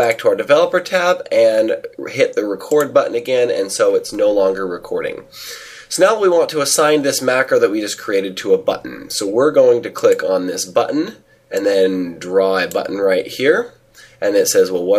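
No technical faults are evident anywhere in the audio.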